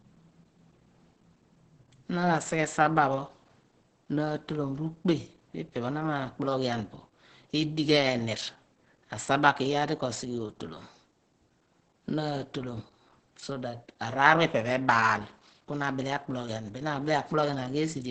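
It's a speech clip, and the whole thing carries heavy Opus compression damage: muffled and hoarse, with nothing above 8.7 kHz. That narrow, throaty character likely comes from Opus's speech (SILK) mode at a low bitrate, which fits something around 12 kbps.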